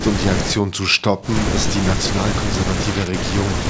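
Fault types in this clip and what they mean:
No faults found in this clip.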